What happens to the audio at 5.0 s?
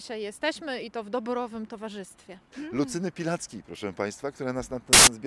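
At 4.93 s the audio cuts abruptly into a burst of very loud white noise that stops just as sharply at 5.07 s, about 0.14 s later. This is file tags played as audio: an embedded cover picture, stored as compressed data, has been read out as if it were samples. Compressed bytes are close to random, so they decode as full-band static with hard edges at both ends of the block.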